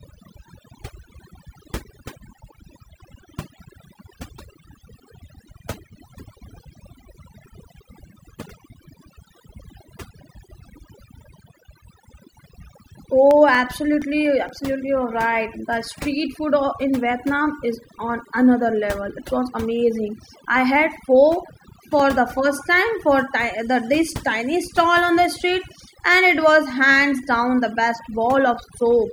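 Overdone noise removal runs through the whole of this speech recording: a noise reducer set far too aggressively pushes individual frequency bands down to nothing whenever they sit close to its noise estimate. The background collapses into near silence dotted with twinkling, chirpy specks, and the quieter components of the voice get stripped along with the hiss. CD scratch ticks appear twice. From 13.31 to 14.72 s, just before "you're right", there are seven short ticks of at most a couple of milliseconds each. From 21.05 to 22.23 s there are six more, the longest a few milliseconds. Each time the damaged spot on the disc passes the laser, the player gets a burst of data too corrupted for error correction to rebuild, so it interpolates across or mutes those samples, producing a regular ticking tied to the disc's rotation.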